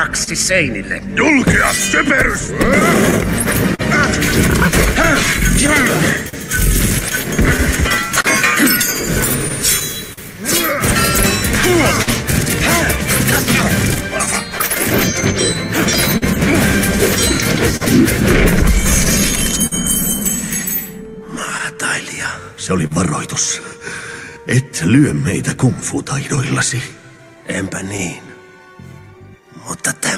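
The audio has clock drift between sender and receiver throughout. The sender's clock runs roughly 3 percent slow. The receiver's buffer keeps draining, so it must stretch or patch the sound to keep playing. Small timing hiccups result, recurring unevenly across the clip.

Scattered short gaps run from 0.23 to 19.7 s. About forty small holes are patched by continuing the previous sound. They total roughly 0.7 s, the longest near 50 ms. Each is heard as a brief tick, smear or hiccup.

From 21.12 to 29.79 s, repeated timing corrections slow playback to 99 percent speed. The receiver keeps repeating short pieces, adding about 150 ms overall. The edits all lengthen the sound. They come unevenly.

More scattered short gaps fall between 21.58 and 28.95 s. About fifteen are filled, totalling roughly 150 ms. The longest is around 40 ms. They sound like quick ticks or smears.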